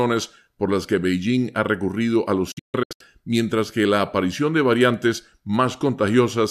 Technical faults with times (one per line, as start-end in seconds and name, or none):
2.51-3.01 digital broadcast dropout